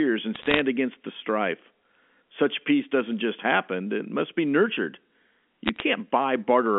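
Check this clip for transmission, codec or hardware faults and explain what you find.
The clip contains two bursts of bit errors on a digital phone line, at 0.34 to 0.59 s, just before "against the strife", and at 5.66 to 5.82 s. Flipped bits in the G.711 A-law stream corrupt individual samples, and a hit on the sign or a high-order bit makes that sample jump, producing a sharp tick. Clustered, the ticks form a short crackle over intact speech within the 200 to 3400 Hz line band. The first burst, at a few tenths of a percent, is roughly twice as dense as the second.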